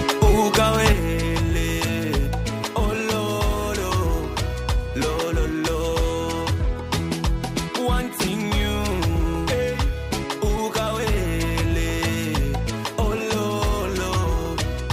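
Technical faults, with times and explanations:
0.93 to 14.92 s, one channel drops out: the level falls abruptly by about 6 dB and stays down to the end. The waveform envelope halves in a single step, and the spectrogram dims evenly across all frequencies. The likely cause is one stereo channel vanishing before the mono sum.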